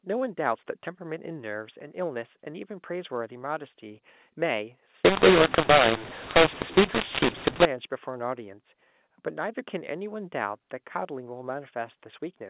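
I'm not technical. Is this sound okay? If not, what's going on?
No, not for one stretch. From 5.05 to 7.65 s the speech turns harsh and gritty and the pauses fill with hiss. That's a mu-law and A-law mix-up. The phone audio was packed one way and unpacked the other, so loud and quiet parts get scrambled.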